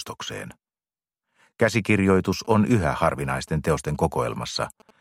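From 1.98 to 4.91 s, GSM signalling bursts intrude: a nearby 2G phone's radio pulses, rectified by the audio circuit, produce a galloping dit-dit-dit of short 217 Hz buzzes roughly 25 dB below the sound.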